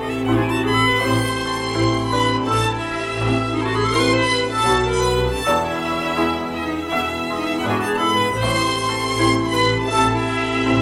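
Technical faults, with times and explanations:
1.28–5.07 s and 8.45 s to the end, Bluetooth SBC bit pool drop: the top end dulls and a gritty, grainy noise rises, then in the first run clears when the rate recovers. This fits the encoder cutting its bit pool from 31 to about 14, near 99 kbps. Starved upper sub-bands lose treble while coarse quantisation adds grit. Packet-loss dropouts would leave gaps. Here the sound keeps flowing and only its quality sags, with the grit setting it apart from a simple low-pass.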